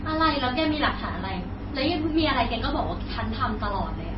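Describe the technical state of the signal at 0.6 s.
MP3 compression is present at 0.6 s and runs through the whole speech clip. It is likely a low-bitrate encode, around 24 kbps, heavily damaged. Nothing is left above 5.6 kHz, so the speech sounds dull, and weak frequency lines switching on and off between frames make it sound watery.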